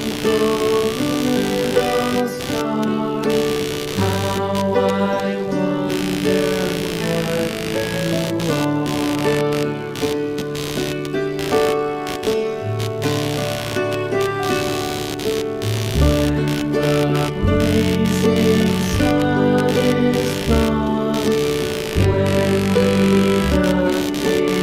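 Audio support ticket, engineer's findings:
Buzzing chirp throughout, pulsing at around 70 Hz, roughly 10 dB under the signal. Computer activity noise: processor or GPU load currents modulating the shared audio ground.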